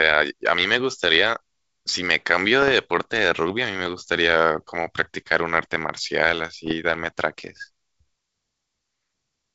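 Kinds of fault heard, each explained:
Bit errors on an ADPCM link: the speech breaks into pops and short rough, crackling bursts with sudden jumps in level, at 2.62 to 2.84 s, 5.03 to 5.06 s and 6.66 to 6.75 s. Stray flipped bits in the coded stream, a small fraction of a percent, knock the decoder's step size and prediction off track. Each hit keeps ringing for some milliseconds before the decoder settles back into the clear wideband G.722 sound.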